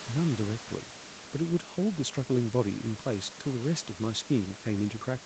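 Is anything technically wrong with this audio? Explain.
No, nothing is technically wrong with this audio.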